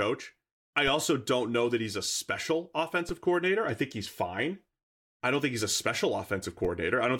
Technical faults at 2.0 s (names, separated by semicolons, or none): none